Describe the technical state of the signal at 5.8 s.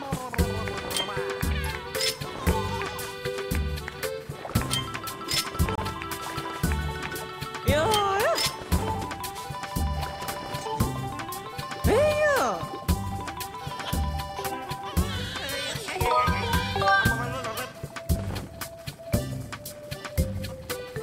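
At 5.75 to 5.78 s there is a block of digital silence: about 26 ms of samples dropped to zero, as when output isn't filled in time. The abrupt cut and return give a short hole; the waveform shows a flat line, the spectrogram a blank vertical band.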